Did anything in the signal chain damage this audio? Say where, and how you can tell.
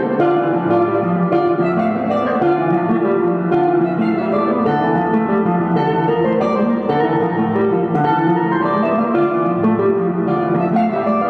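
No, no signal-chain damage heard.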